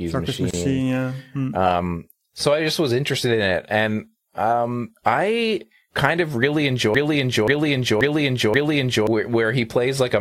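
At 0.51 s the speech drops out for about 30 ms, resuming at 0.54 s exactly where it stopped. This is a gap at a join of encoded pieces: segments encoded separately were joined with the encoder's start delay and end padding left in. The waveform shows a flat notch with slightly smeared edges, and the spectrogram shows a thin blank vertical stripe.

After "I kind of really", from 6.95 to 9.07 s, a broken-record loop takes over: a 0.53 s fragment plays four times back to back, likely because the stream stalled and kept resending its last held piece. The speech due there is lost. On the waveform the same block repeats identically, and the spectrogram shows one pattern tiled across.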